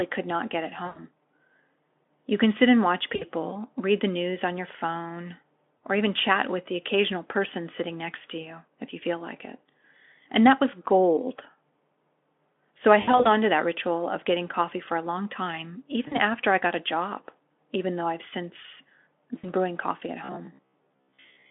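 Speech heard over a Speex link, whose line band of roughly 200 Hz to 3.5 kHz is audible throughout, carries two kinds of fault. VoIP packet loss concealed by the speech codec occurs at 0.85–0.99 s, 3.15–3.25 s, 5.80 s, 8.41–8.48 s, 13.01–13.28 s, 16.07–16.19 s and 19.38–19.50 s. At each gap the decoder stretches its last pitch and spectral shape into a buzzy tone or a coloured noise that fades, and the speech stays weak for a while after the packets resume. The longest gaps are 100 ms at 0.85 s and 140 ms spread over about 240 ms around 13.0 s. From 20.24 to 21.50 s there is robotic sound from repeated short buffers: a rigid, metallic 66.8 Hz buzz with about half the audio replaced by repeats. The likely cause is a 15 ms block being replayed while real audio is skipped.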